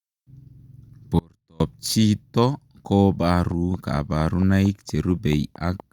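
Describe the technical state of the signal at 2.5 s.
At 2.5 s the speech signal is intact, with no dropout, distortion or other fault audible at that point.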